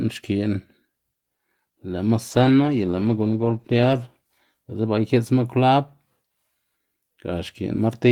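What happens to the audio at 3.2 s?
At 3.2 s you're in the middle of a call bitrate drop that runs from about 2.3 s to 4.05 s. The link's bandwidth estimate sagged, so the encoder got squeezed, with the coarseness pointing to a fall from roughly 32 kbps to around 14 kbps, held at the bottom for about 1.7 s. With so few bits the speech gets coded crudely and the top end is trimmed, so it sounds rough, watery or muffled until the rate climbs back.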